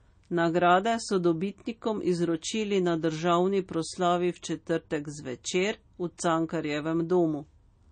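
Heavy lossy encoding, most likely MP3 compression at a low bitrate around 32 kbps, runs through this whole speech clip. The encoder has cut everything above 9 kHz and starved the remaining bands, so the sound is dull and plainly watery, with swirling artefacts throughout.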